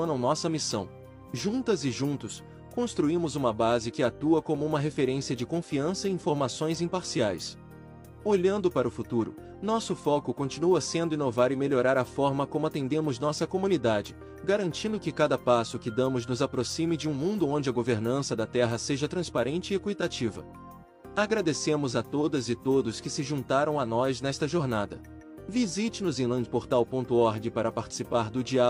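No technical faults can be heard at any point in the audio. There is nothing to place in time, since no moment stands out as going wrong.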